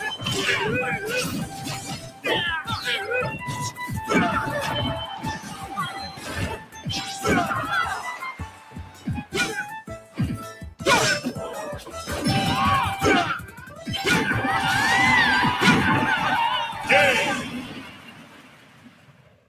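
Throughout, the level pumps and flutters, with held material and tails thinning while attacks punch through, a swing of roughly 15 dB. A noise suppressor built for speech is applied to music or sounds, mistaking steady content and ambience for noise.

Sound is cut by the noise suppressor at 1.44–2.25 s, 5.14–5.75 s, 5.96–6.87 s, 8.32–9.34 s, 9.98–10.19 s, 10.49–10.64 s, 13.47–13.88 s, and from 17.62 s to the end. Sustained passages sink by about 8 to 12 dB and decays are clipped short, because the suppressor judged them noise and pulled them down harder than the rest.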